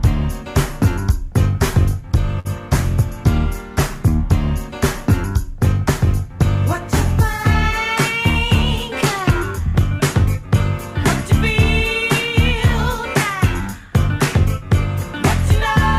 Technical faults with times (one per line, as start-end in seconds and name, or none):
2.39-2.47 short stall from a late packet
9.22-9.80 jitter buffer speed-up